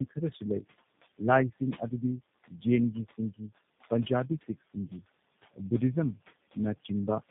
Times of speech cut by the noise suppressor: 0.09-0.43, 2.48-2.65, 3.05-3.50

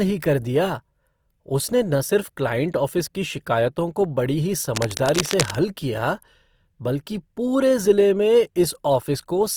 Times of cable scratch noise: 4.75-5.56

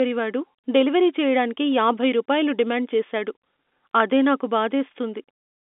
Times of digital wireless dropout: none

